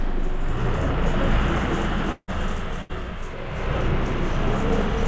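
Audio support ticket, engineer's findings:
Everyday sound clip, 8 kHz band limit consistent with the G.722 call path.

2.12–2.30 s: fading buzz/hiss continuation of the preceding sound, decaying to about 50 ms of silence before the sound resumes further on. About 160 ms of material never played. Likely cause: long network dropout, with jitter-buffer concealment running out. Distinguished from a loss burst by reaching true silence and by the longer gap.

2.82–2.91 s: burst of packet loss. Brief held continuation of the last sound, about 75 ms, faded but never reaching silence. Playback rejoins about 80 ms later in the material, with the span in between skipped. Distinguished from the earlier dropout by the shorter concealment, no silent tail, and a resume straight out of the concealment rather than a return from silence.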